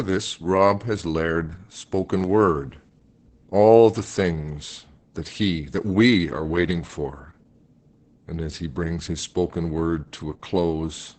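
Opus voice compression runs throughout the speech. Nothing is heard above about 8.8 kHz, which fits the codec holding a wideband setting with its SILK linear-prediction coder alone. That coder models the vocal tract with a few filter parameters and spends very few bits on the excitation beneath them. Here the damage is heavy: the speech sounds muffled, hoarse and faintly robotic, consistent with a bitrate near 10 kbit/s in 20 ms frames.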